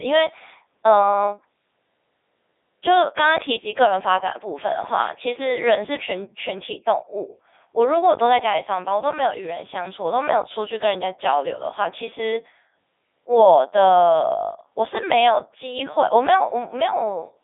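From start to finish, the speech has passed through a Codec 2 vocoder. The waveform itself is gone. Only pitch, voicing, energy and a rough spectral outline survive, and the decoder rebuilds the voice from sine waves. The result is robotic and buzzy, with heavy damage throughout. The sound points to the top 3.2 kbit/s mode. The band runs from about 300 Hz to 3.7 kHz, and nothing is left above 3.8 kHz.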